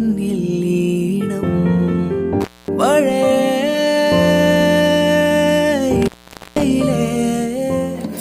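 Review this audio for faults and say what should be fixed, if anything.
The sound drops out abruptly twice, with crackle at each edge and faint hiss in the gap: from 2.41 to 2.68 s, with about 240 ms fully open, and from 6.02 to 6.62 s, with about 480 ms open. This is intermittent contact, where a loose cable or plug briefly breaks the signal path. Reseat or replace the suspect cable and connectors, and secure them with strain relief so they cannot shift during recording.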